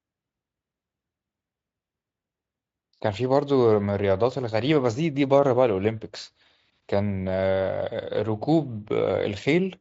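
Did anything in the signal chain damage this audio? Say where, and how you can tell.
No, nothing in the signal chain audibly damages this speech. It has passed through a Speex codec at a high-quality setting, consistent with around 34 kbps, and its effect on the sound is faint at most.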